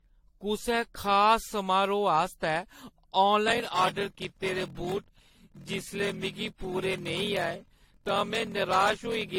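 From the start, the speech sounds swirly, smeared and hollow, with blurred consonant onsets and nothing above 16.5 kHz. The likely cause is generation loss from around seven passes through AAC-LC at 64 kbit/s. On a spectrogram, this appears as a hard ceiling with patchy holes scattered through the upper bands.

From 3.46 s to the end, a block size mismatch (padded) sets in. Short blocks, which fit 1024 samples, are each followed by inserted silence. This produces a 41.7 Hz buzz and slows playback to 0.889 times speed while the timbre stays. The waveform shows regular gaps, and the spectrogram shows evenly spaced vertical stripes.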